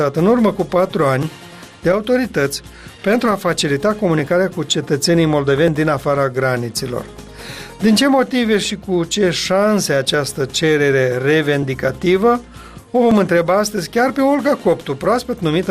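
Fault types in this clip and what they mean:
Clock drift buffer slips: about ten regular clicks, one every 1.48 s, likely two free-running clocks roughly 700 ppm apart dropping or repeating small sample blocks.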